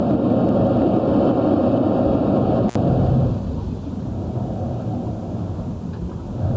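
Gain pumping runs through the whole recording of everyday sounds. The gain is pulled down by something like 15 dB each time a loud sound arrives, so loud and quiet parts sit unnaturally close in level and the result feels squashed. The likely cause is input gain set far too high with a fast limiter or compressor clamping down on each peak. On a waveform the peaks are flattened to a near-constant ceiling.

At 2.68 s an intermittent contact opens the line for about 60 ms, until 2.75 s. A loose cable or plug briefly breaks the signal path, so the sound cuts out abruptly with crackle at each edge, and only faint hiss remains during the break. The waveform shows a sharp collapse to near silence bounded by two spiky clicks. The spectrogram shows a narrow vertical gap framed by thin broadband streaks, with the low hiss carrying through, and nothing above 8 kHz either side of it, consistent with the call's band-limited microphone path.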